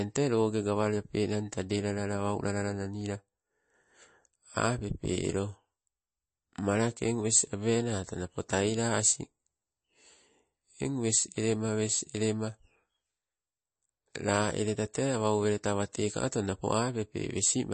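Throughout the speech, nothing sits above 8.3 kHz, and weak spectral detail flickers frame to frame, giving a plainly audible watery, swirly texture with smeared attacks. The likely cause is MP3 compression at a bitrate that fits about 32 kbps, where starved frequency lines get zeroed.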